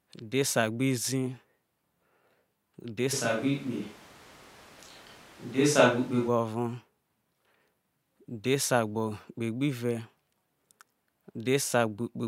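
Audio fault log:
3.15–6.27 s, switch to a distant microphone: speech suddenly turns roomy and hollow with thinner bass at roughly the same level, likely from a far microphone taking over. The spectrogram shows faded low bands, smeared tails and background about 25 dB down, with abrupt edges.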